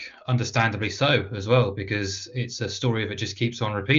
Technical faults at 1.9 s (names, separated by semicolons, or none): none